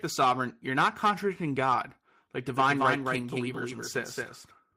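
Right after "sovereign you're not contradicting", from 1.71 to 1.81 s, there's a lost packet rebuilt from error correction. A few packets went missing, and the decoder filled the hole with the low-bitrate backup copies carried in the following packets. There's no gap, but that stretch turns grainy and a bit noisy.

From 2.56 s to the end, a doubled audio track comes in abruptly. It's a second copy, about 5 dB quieter, trailing about a fifth of a second behind, with no room tail. The likely cause is a slower capture path mixing in the same signal again.

The same kind of rebuilt-packet roughness shows up again at 3.17 to 3.27 s, inside the doubled section, and it has that same coarse, noisy texture.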